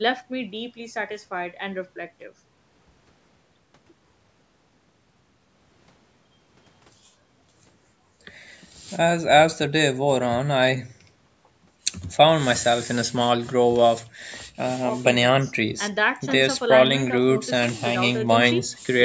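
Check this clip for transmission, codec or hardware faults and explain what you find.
Nothing stood out on listening; the speech carries the usual call microphone processing, with no content above 8 kHz and the lowest bass trimmed, and that is simply how the call path shapes the sound.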